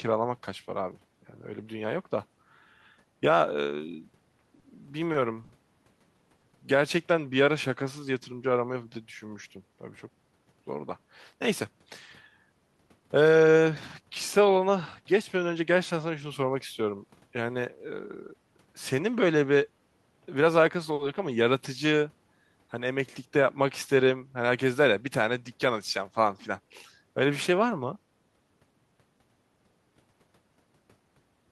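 From 4.59 to 6.44 s the speech runs into repeated stalls, a proper stutter. Packets were turning up late, so the jitter buffer kept running dry, four times in under two seconds. Each time the receiver just carried the last sound on until data showed up, filling 150 ms in total, none of it longer than 50 ms. Nothing's actually lost, but that stretch drags and catches, with about 8% of it papered over.

Then at 7.45 to 8.06 s there's a jitter buffer slow-down. The buffer was low, so the receiver built up some reserve by repeating single pitch periods over and over, adding 49 ms. Playback drops to about 93% speed while the pitch stays put, so sounds come out a little drawn out.

The opposite happens at 10.09 to 10.60 s, a jitter buffer speed-up. Too much audio had piled up in the buffer, so the receiver trimmed short pieces of a pitch period or so, one after another, to bring the delay back down. 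Roughly a tenth of a second goes, and that bit runs at about 116% with the pitch unchanged, so it sounds noticeably hurried. A second, milder speed-up comes at 24.02 to 24.49 s, around 50 ms trimmed at 109%, which just feels a touch rushed.

In between, at 20.94 s, there's a short stall from a late packet. One packet wasn't there when it was due, the buffer emptied, and the receiver stretched the last sound for 50 ms until it arrived, then picked up right where it left off. The delay goes up by 50 ms from there. You hear one sound hang on a beat too long, with a faint buzzy dip.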